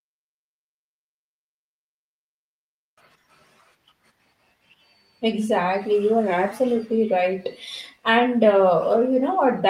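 No technical faults are audible.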